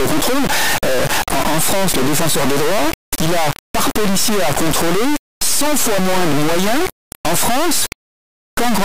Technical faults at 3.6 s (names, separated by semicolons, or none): integer read as float